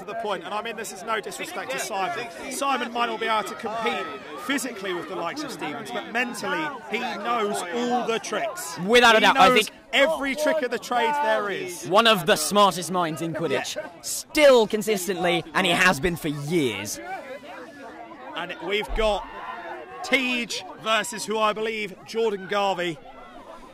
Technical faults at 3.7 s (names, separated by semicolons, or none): sample clock jitter